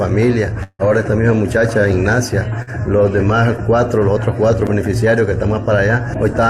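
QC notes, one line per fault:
0.63–0.89 s, long network dropout: the last sound is stretched into a fading buzz or hiss for about 156 ms, then about 30 ms of near-silence. Roughly 120 ms of audio never returns, and playback resumes with its timing shifted by around 40 ms, likely a stalled stream concealed by the receiver.
2.62–2.70 s, burst of packet loss: about 40 ms of audio is lost, and the preceding sound is held and faded over about 49 ms to cover the hole. It resumes further on with the missing stretch skipped, heard as a brief buzz or hiss.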